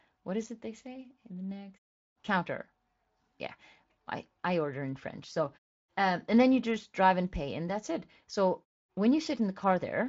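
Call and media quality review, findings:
No faults heard; nothing to action.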